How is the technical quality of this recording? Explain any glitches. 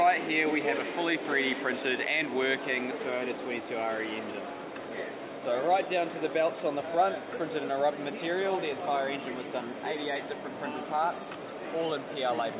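Nothing here stands out as a glitch: the audio runs along steadily without any dropouts, clicks or other technical hiccups worth pointing to.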